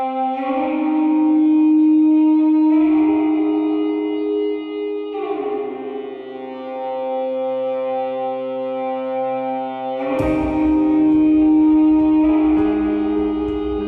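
From start to end, the sound is dull, with a gurgling, granular distortion. This is likely MP2 compression, with upper bands starved of bits, fitting about 80 kbps.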